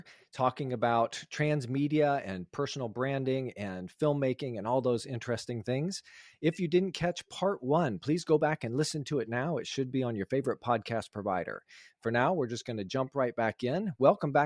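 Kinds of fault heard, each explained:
No technical faults are audible anywhere in the recording.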